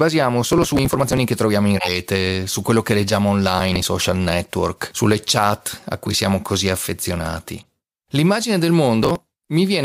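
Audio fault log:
0.50–1.17 s, 3.58–3.85 s and 9.03–9.25 s: processor overload crackle. The first run ends just before "che troviamo in". The second falls between "su quello che leggiamo" and "network sulle chat a". The processing could not keep up, and many short buffers were dropped outright, leaving nothing in their place. Each dropped slice cuts the speech with hard edges. The gaps fit buffers of around 10 ms. Dozens of them in quick succession fuse into a gritty tearing over the voice. It stops once the load eases.
1.76–1.95 s, 6.06–6.12 s and 7.61–7.64 s: corrupt frame decoded. The last follows "siamo così affezionati". Damaged compressed frames were decoded as if they were valid. Misread gains and codes put energy at the wrong frequencies. The result is a foreign blip that lasts about as long as the damage. The first event spans a few consecutive frames, so it runs longer. The other two each hit about one frame and are brief.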